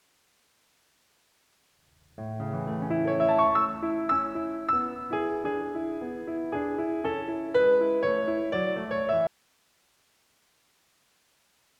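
At 9.27 s the music cuts out abruptly and never returns, leaving only hiss roughly 40 dB below the programme level until the end. This is an audio dropout to a faint residue, likely a lost signal feed while the downstream path stayed live and kept passing its noise floor.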